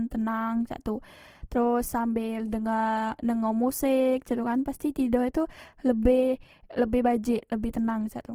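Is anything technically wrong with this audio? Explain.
Yes. Throughout the speech there is plainly audible damage that is likely Opus compression. The encoder keeps each band's energy, but when bits run short it fills bands by folding lower ones or with noise, so the voice sounds rough and grainy. The band stays full-width, reaching about 20.2 kHz, and the damage points to music-mode coding at a low bitrate of around 16 kbps. Unlike MP3, there are few spectral holes and little swirling; the texture is noisy rather than watery.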